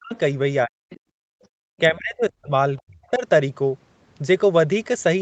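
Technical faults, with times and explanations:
0.00–0.13 s, 0.65–0.89 s and 1.79–3.23 s, speech suppressed in double talk: the talker's level collapses in patches, by about 40 dB at worst, likely because the echo canceller mistook overlapping talk for echo. The waveform shows sudden envelope holes, and the spectrogram shows energy blanking out.
0.13–0.19 s, 0.90–1.00 s, 1.43–1.47 s and 2.77–2.82 s, other side's voice leaking through: brief, faint scraps of a second voice, about 20 to 40 dB below the talker, likely residual loudspeaker echo that the canceller missed. The spectrogram shows thin, short harmonic smears, and the waveform shows barely visible low ripples.
1.17–1.61 s, background gated by the echo canceller: the room tone dips by about 30 dB for roughly 0.4 s while the loudspeaker plays, then returns once the canceller releases. The waveform noise floor flattens to near silence, and the spectrogram shows a vertical band of missing background texture.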